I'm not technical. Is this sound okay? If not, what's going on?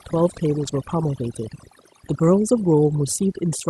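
No. A noise reduction tool was set far too strong, which is overdone noise removal. Whenever parts of the sound resembled background noise it shut them off, taking quieter bits of the voice with them. Throughout, the background drops and breaks up into twinkling specks.

There are also two brief moments of lost packet rebuilt from error correction, at 0.63 to 0.69 s and 2.23 to 2.33 s. Pieces of the call's audio went missing, and rougher backup copies were played instead, so there's no gap, just short stretches that sound grainier and noisier.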